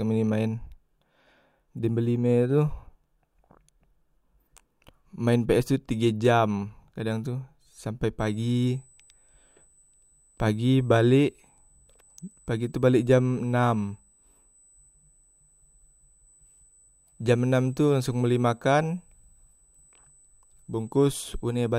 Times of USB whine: 8.19-21.78

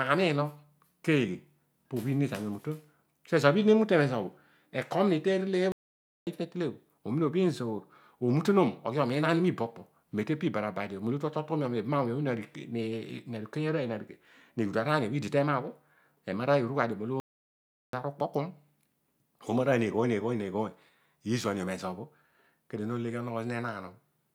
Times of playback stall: 5.72-6.27, 17.20-17.93

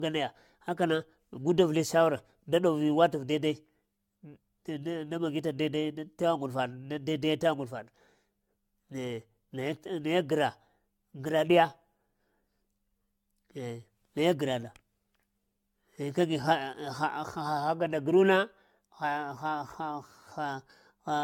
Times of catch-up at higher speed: none

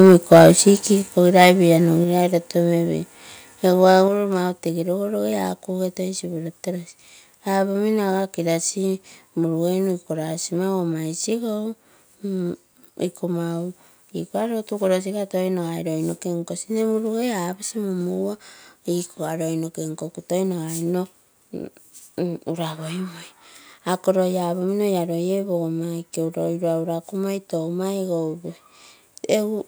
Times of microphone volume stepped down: 1.02, 2.04, 4.08

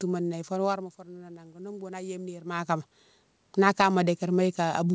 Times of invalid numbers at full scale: none

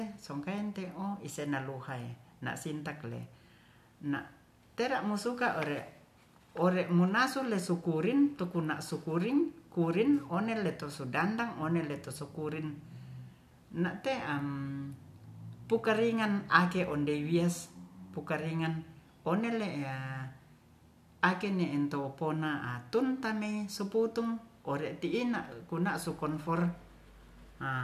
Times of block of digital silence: none

